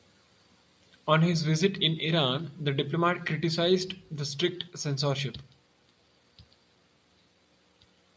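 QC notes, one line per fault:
No faults found in this speech clip. It went through call microphone processing, which rolls off the lowest bass and leaves nothing above 8 kHz, as that path normally does.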